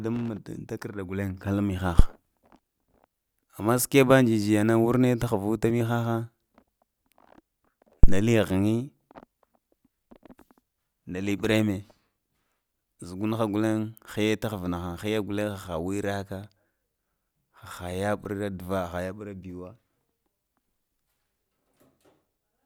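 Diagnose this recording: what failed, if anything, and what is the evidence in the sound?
Analogue input: phantom power switched on or off live, its step passing the coupling capacitors, gives phantom power thumps at 1.99 s and 8.04 s, peaking at about -2 and 0 dBFS.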